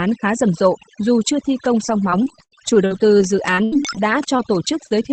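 Overdone noise removal was applied too aggressively across the whole clip, switching off frequency bands near the noise floor, so the background drops and breaks up into twinkling specks.

From 1.87 to 4.93 s, repeated packet loss leaves recurring holes, the longest about 78 ms. Each is patched by extending the previous sound, roughly half a second in total, giving choppy, robotic speech with pieces missing. The dull top end, which fits a wideband call codec such as Opus with an 8 kHz bandwidth, is the call path working as intended.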